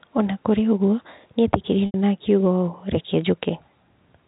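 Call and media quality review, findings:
Packet loss with pitch repetition, 1.86 to 1.94 s, just after "na kũrĩ ũguo nĩ". 80 ms gap, which fits four 20 ms packets. Concealment repeats the last pitch period, fades it to silence, then cross-fades back into the speech. Telephone band throughout, consistent with G.711 A-law coding at 64 kbps. Nothing above 4 kHz. Codec damage faint at most.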